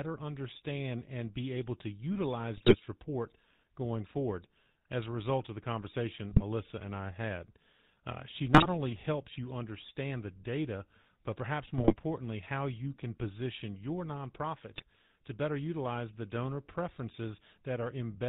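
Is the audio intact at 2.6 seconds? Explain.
No. GSM bit errors hit from 2.56 to 2.78 s. Corrupted filter, pitch and gain values distort frames, so the sound breaks into squawks, pops and gargling. Underneath, the GSM full-rate codec is plainly audible. It cuts everything above 4 kHz and adds a buzzy, gravelly roughness, consistent with 13 kbps.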